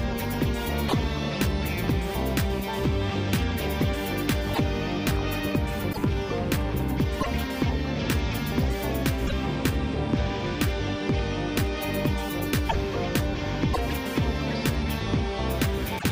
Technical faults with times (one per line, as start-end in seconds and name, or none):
0.88-0.93 broken MP3 bit reservoir
4.53-4.59 broken MP3 bit reservoir
5.92-5.97 broken MP3 bit reservoir
7.20-7.27 broken MP3 bit reservoir
9.26-9.33 broken MP3 bit reservoir
12.68-12.75 broken MP3 bit reservoir
13.73-13.78 broken MP3 bit reservoir
15.98-16.04 broken MP3 bit reservoir